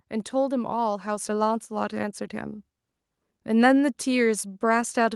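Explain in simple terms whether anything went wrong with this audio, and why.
Something did go wrong, at 1.2 s: the microphone volume stepped up. The calling software judged the microphone too quiet and turned its input up in one instant jump. You can tell it apart from a speaker simply leaning closer, because here the voice and the background noise get louder together, in an abrupt step rather than a gradual swell, and everything stays at that higher level afterwards.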